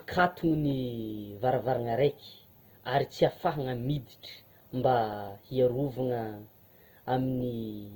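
Throughout, likely Opus compression, fitting about 24 kbps, fills starved bands with noise, leaving the speech grainy and rough up to 20.1 kHz.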